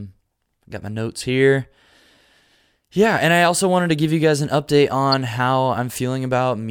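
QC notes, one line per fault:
5.12–5.14 s, corrupt frame decoded: a loud, sharp chirp or burst of noise right after "you guys an update"; flipped bits in a couple of frames decoded into misplaced spectral energy.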